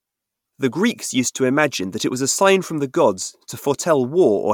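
No technical faults can be heard anywhere in this speech recording.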